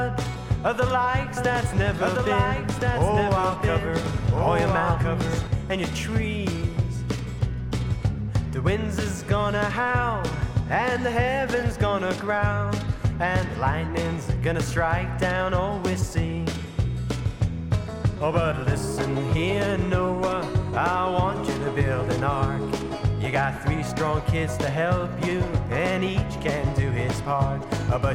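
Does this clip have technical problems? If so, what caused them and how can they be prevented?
Yes: from 1.37 to 5.47 s a doubled audio track is heard. A second copy trails by roughly one and a half seconds, a few dB quieter, and starts and stops abruptly. This is likely from a slower capture path or an edit leaving two misaligned copies. Monitor only one input path and check edits for duplicated regions.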